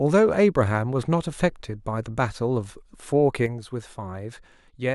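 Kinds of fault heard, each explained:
One channel drops out: from 3.46 s to the end of the clip, the speech falls abruptly by about 6 dB and stays there. The likely cause is one side of a stereo pair going silent, so the mono sum carries only half of what both channels shared, and anything present only in the lost side vanishes. On a waveform the envelope steps down to roughly half its height at 3.46 s; a spectrogram shows every band dimming at once, with no change in timbre.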